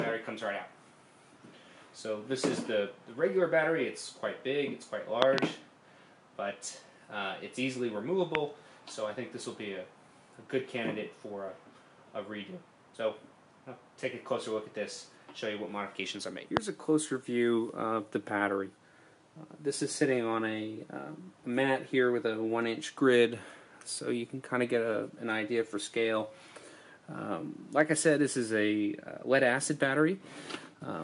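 Loud pops occur at three points. Between 5.22 and 5.40 s there are two in quick succession, a double thump peaking at about 25 dB above the surrounding audio. Single pops follow at 8.35–8.37 s, about 20 dB up, and at 16.57–16.59 s, about 25 dB up. Each is a brief voltage step or pulse, likely from a switch, plug contact or static discharge, added on top of the signal, which continues uninterrupted beneath.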